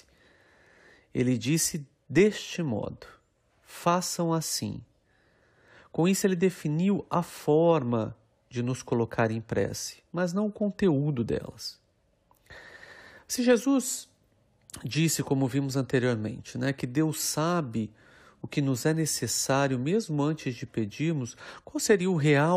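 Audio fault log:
Nothing in this speech clip stood out as a fault on listening.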